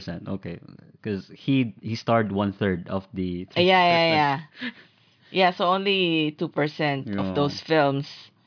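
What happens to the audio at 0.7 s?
Nothing goes wrong at 0.7 s; the speech there plays through intact, with no dropout, click or distortion.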